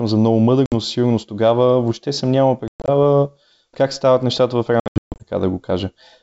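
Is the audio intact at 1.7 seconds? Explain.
Yes, the speech at 1.7 seconds is intact, carried cleanly through the G.722 wideband telephone coding at 64 kbit/s, with no dropout, click or distortion at that point.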